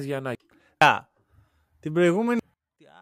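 At 0.35 s, 0.82 s and 2.39 s, compressed frames are skipped: the decoder loses a run of consecutive frames, either missing from the stream or rejected as damaged, and playback jumps straight past them. Each jump discards roughly 0.7 s of speech, several frames' worth, which fits a frame length near 93 ms. At each join the speech resumes abruptly further along.

From 2.54 s to the end, the level drops by about 24 dB. This is likely one channel inverted: with one side's polarity reversed, everything common to both channels cancels when they are summed to mono. The centred speech almost disappears, leaving only a faint residue made of the small differences between the two channels.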